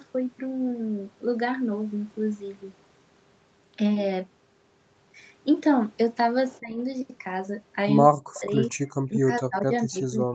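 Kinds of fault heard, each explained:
Speech suppressed in double talk: The speech level dips by about 15 dB for roughly a fifth of a second at 6.6 s. It then falls far deeper, by about 40 dB, from 8.16 to 8.61 s and again from 9.08 s to the end. The likely cause is an echo canceller that could not tell its own talker from loudspeaker echo while both sides spoke, and so turned everything down. A waveform shows the envelope collapsing abruptly, and a spectrogram shows energy fading across all frequencies into near-empty blocks.
Echo leak: Two brief, faint scraps of a delayed copy of the voice appear, at 8.34 to 8.41 s and 8.62 to 8.69 s. Each trails the original by about 0.22 s (217 and 218 ms) and sits about 20 and about 30 dB below the speech. These are likely loudspeaker sound that an echo canceller failed to remove and sent back. A spectrogram shows short, weak repeats of earlier harmonic patterns shifted later in time, and the waveform shows only small bursts.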